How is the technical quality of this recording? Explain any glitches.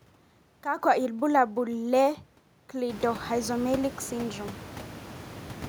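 No technical faults are audible.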